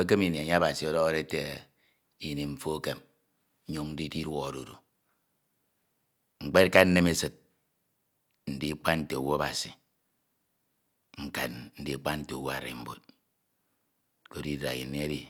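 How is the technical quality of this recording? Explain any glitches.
No technical glitches are audible.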